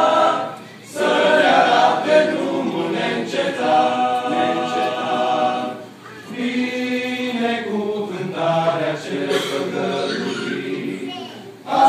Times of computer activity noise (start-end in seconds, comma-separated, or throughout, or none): none